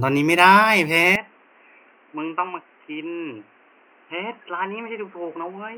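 A speech clip that goes dull and boxy at 1.16 s and stays that way to the end, with nothing above 3.1 kHz, the level dropping by around 10 dB and new background noise roughly 30 dB down. No gap at the change. Likely the input switched to a poorer device.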